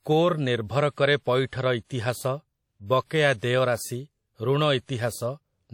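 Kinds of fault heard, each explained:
WMA compression: A ringing, washy quality runs through the whole speech clip, with a hiss that swells and fades with the signal and nothing above 17.9 kHz. The damage is plainly audible, which fits a low bitrate near 48 kbps. Unlike simple band-limiting, the smearing likely comes from a transform codec such as WMA.
Pre-echo: From 1.47 to 1.53 s, a brief hiss of about 59 ms comes just before a sharp attack, which then sounds softened. The codec's block spreads noise meant for the loud onset back into the quiet moment before it. A click or dropout would instead be abrupt.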